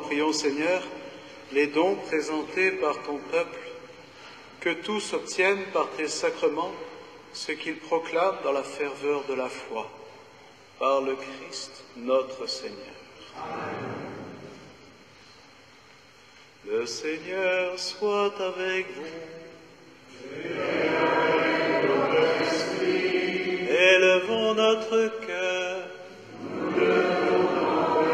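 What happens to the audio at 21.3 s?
Nothing goes wrong at 21.3 s; the audio plays through that moment intact, with no dropout, click, distortion or other fault.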